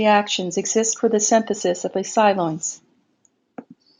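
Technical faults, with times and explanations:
No technical faults detected in the speech.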